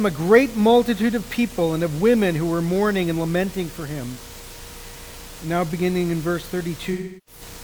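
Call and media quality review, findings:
AAC frame loss with concealment, 6.92–7.41 s: about 0.34 s smeared and washy. The decoder is reusing the last good spectrum, which fits roughly eight dropped frames.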